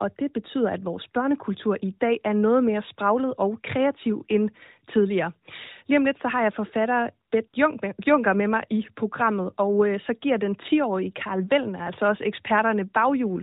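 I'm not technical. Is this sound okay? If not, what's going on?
No. AMR comfort noise appears just after "så har jeg forfatter", at 7.30 to 7.32 s and 7.48 to 7.54 s. The phone briefly decided nobody was talking and swapped real sound for smooth artificial hiss, unlike a dropout, which goes silent.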